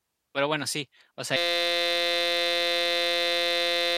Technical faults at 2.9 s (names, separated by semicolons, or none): system hang loop